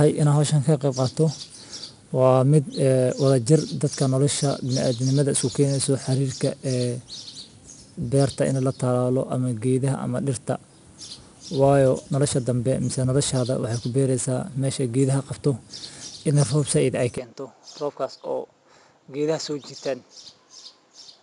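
From the start, 4-bit ADPCM compression coats the speech in a gritty hiss that rises and falls with the voice and roughens sharp onsets where the coarse step size lags. Nothing passes above 10.6 kHz. Because the grit tracks loudness, it is not steady background noise.

At 17.18 s, just after "idin ay", the sound turns duller and about 10 dB quieter through to the end, with no gap. The band now stops at 7.6 kHz and a faint new noise floor appears, which points likely to the input switching to a poorer device rather than a simple EQ change.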